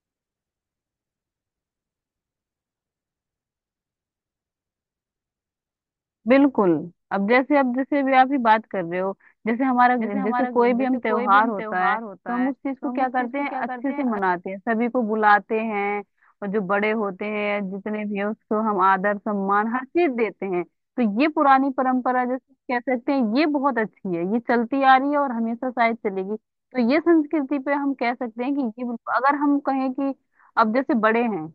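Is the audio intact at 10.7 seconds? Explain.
No. At 10.7 seconds you're inside a doubled audio track that runs from about 9.99 to 14.19 s. A second full-band copy of the speech trails the original by roughly half a second and sits around 10 dB quieter, with no decay or room colour, just a clean, dry repeat. It cuts in and out abruptly at those edges. The likely cause is the same signal being picked up again through a slower path, or two out-of-step copies left in an edit.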